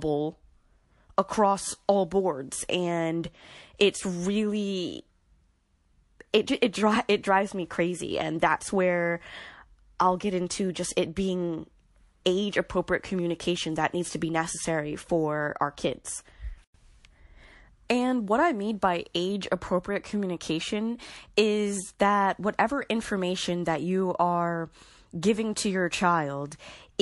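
Likely MP3 compression at a low bitrate, consistent with 48 kbps, drops weak detail throughout, so the speech sounds watery and swirly. At 3.78 s, after "across all boards and", one long transform block spreads its noise ahead of an attack, producing pre-echo: a brief hiss about 13 dB up that smears the onset.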